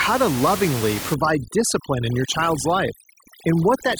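From 1.14 s, just after "to lovingly", to the end, overdone noise removal sets in. The reducer cuts any frequency band near its noise estimate, taking quiet speech detail with it. Room noise about 10 dB under the speech drops and breaks up into twinkling specks.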